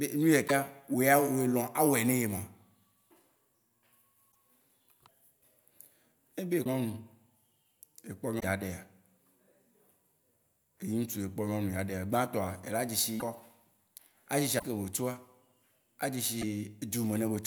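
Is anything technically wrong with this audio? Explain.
Yes. The speech skips ahead with a brief chirp, noise burst or short gap at 0.47–0.51, 4.31, 6.64–6.67, 8.39–8.44, 13.19–13.22, 14.58–14.63 and 16.41–16.43 s. That's likely a broken MP3 bit reservoir: frames went missing, so the following 24 ms frames decoded borrowed bytes from the wrong frame.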